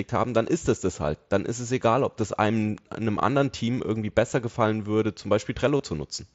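Right after "besser gefallen würde zum", from 5.77 to 5.80 s, there's a short gap of about 22.5 ms covered by concealed Bluetooth headset packet loss. Headset packets went missing, which fits roughly three lost frames, and the receiver filled the hole by repeating the best-matching slice of the preceding waveform. It's a run of lost frames, so you hear a buzzy tone held at full level and a little warble as the real speech picks back up, sitting over the mSBC codec's 8 kHz-limited, lightly grainy sound.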